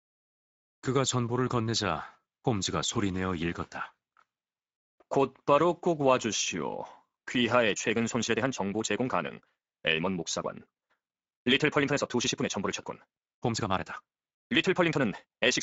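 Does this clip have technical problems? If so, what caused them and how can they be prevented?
Yes. The Speex codec runs throughout, making the speech noisy and hoarse. A spectrogram shows only a shaped, noise-like fill above 8 kHz, and the roughness fits a mid-range Speex bitrate near 17 kbps. To prevent it, record or transmit with a modern codec such as Opus at a higher bitrate.

From 7.69 s to the end, a time-stretched section plays about 1.63 times faster at unchanged pitch, sounding rushed. Software fitting the audio to a length likely dropped short pieces. On a waveform, syllables crowd together, while spectrogram harmonics keep their spacing. To prevent it, avoid automatic length-fitting, or trim pauses instead of speeding up the speech.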